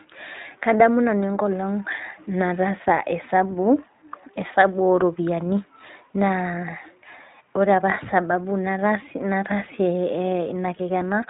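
Speech, coded with the iLBC codec from start to finish. The damage is plainly audible. Nothing above 3.8 kHz survives, so the sound is narrowband and dull at the top. The voice has a slightly rough, synthetic edge. iLBC codes each frame's excitation on its own, without drawing on the frame before, and the roughness fits that frame-by-frame approach. The character fits 20 ms frames at around 15.2 kbps.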